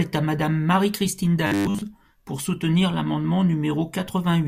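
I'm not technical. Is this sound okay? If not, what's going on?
No. From 1.47 to 1.82 s there is robotic sound from repeated short buffers. The voice becomes a flat, metallic 100 Hz buzz, most likely because new audio arrived too slowly and the software kept replaying the last 10 ms in place of most of the real sound.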